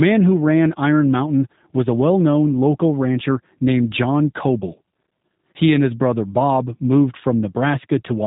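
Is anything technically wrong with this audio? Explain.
Yes. Throughout the speech the sound is slightly rough and synthetic, with a muffled top end where nothing above about 3.8 kHz comes through. This is G.729 codec damage, and it is plainly audible. The codec rebuilds speech from a vocal tract filter, a pitch predictor and a few coded pulses per short frame, so fine detail in the waveform is discarded. The roughness points to a very low rate, which fits G.729A at 8 kbit/s.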